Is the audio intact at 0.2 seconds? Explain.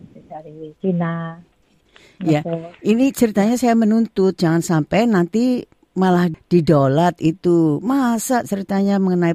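Yes, the audio is intact at 0.2 seconds, with no fault present at that moment.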